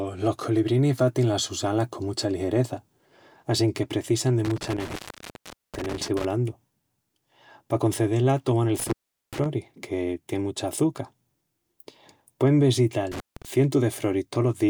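A speech recording marred by intermittent contact, a loose cable or plug briefly breaking the signal path. After "assinque precisan de" the sound crackles and drops out between 4.45 and 6.25 s, open for about 0.79 s. After "toman el" it cuts again from 8.80 to 9.46 s (open 0.40 s) before "que tien mucha açuca". A shorter break follows at 13.12 to 13.45 s (0.17 s). On a waveform each gap collapses to a near-flat line framed by spiky clicks. A spectrogram shows vertical broadband streaks at the edges with only faint hiss between them.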